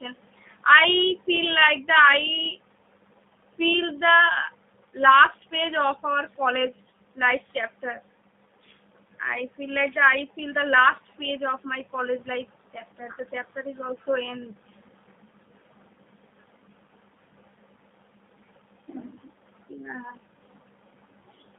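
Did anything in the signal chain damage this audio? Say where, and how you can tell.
Yes, at the codec stage, and it's there the whole way through. The speech is squeezed into roughly 150 Hz to 3.6 kHz and has that rough, slightly synthetic edge of G.729, which fits an 8 kbit/s stream rebuilding speech from a filter model and a few pulses per frame.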